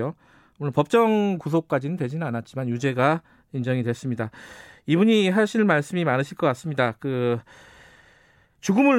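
No technical faults can be heard anywhere in the recording; the speech signal stays steady and intact throughout.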